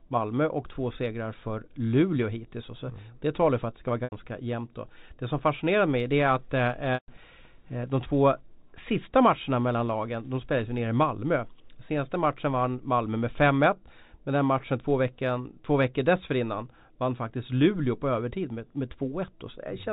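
Packet loss with pitch repetition hits at 4.04 s for 80 ms and at 6.94 s for 140 ms. The receiver fills each gap by looping the last pitch period: the first sounds like a briefly held, buzzy tone, while the longer second fades toward silence before speech cross-fades back in.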